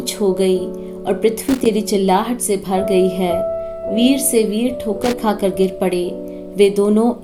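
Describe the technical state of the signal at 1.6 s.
At 1.6 s the signal is breaking up with loose connector crackle. The burst runs from about 1.44 s to 1.66 s, so 1.6 s falls near its end. A worn or dirty contact is making and breaking as it shifts. Each break chops the audio for an instant. Any DC riding on the line turns the reconnections into pops. The result is a short, irregular spray of crackle and scratching across roughly a fifth of a second.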